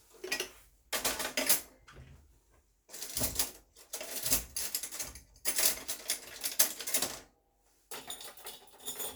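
Sound recording, no technical faults detected.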